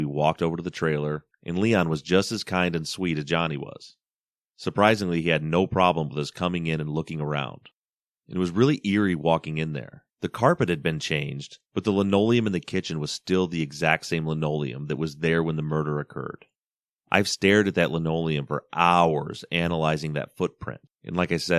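No technical faults are audible.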